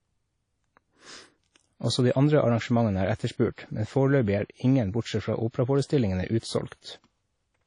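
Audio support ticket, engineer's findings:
Transform codec in the path, likely WMA compression at a low rate, consistent with about 32 kbps. Long blocks smear quantisation noise over tens of ms, and weak spectral lines get zeroed. Audible throughout the speech: ringing, washy texture, hiss breathing with the signal. Nothing above 10.1 kHz. Codec damage plainly audible.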